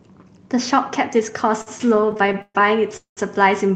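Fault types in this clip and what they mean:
Repeated stalls (stutter): Between 1.61 and 2.57 s the speech catches fourteen times. Each pause, up to 129 ms, is filled by stretching the last sound, so the speech drags.
Call audio freeze: At 2.97 s the speech halts for 202 ms, fading into 120 ms of silence, then resumes intact. The likely cause is packets held up in transit.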